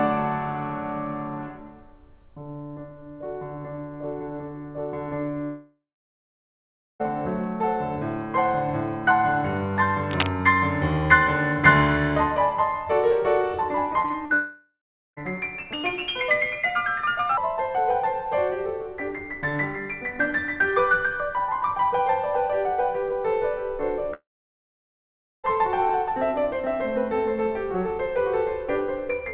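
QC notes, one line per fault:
5.44–7.10 s, 14.34–15.19 s, 24.14–25.46 s, long network dropout: a likely stall in the incoming stream left the receiver extending the last sound, which fades to silence for about 1.2 s, 0.4 s and 1.2 s, then the music resumes with the section lost.
10.11–10.27 s, cable scratch noise: a likely disturbed connector or cable briefly changed contact, laying dense, ragged scratching about as loud as the music itself.
14.02–14.32 s, repeated packet loss (robotic sound): four successive gaps, the longest 39 ms, were patched by repeating the last sound, so about 38% of this span is synthetic, giving choppy music with pieces missing.
15.73–17.37 s, section at the wrong speed: this stretch likely plays against the wrong clock, running 1.36 times fast, so the music turns hurried and rises about five semitones.
24.11–24.14 s, short concealed packet loss: 20 ms of audio arrived too late and was filled by extending the preceding sound, heard as a brief smear just before the dropout.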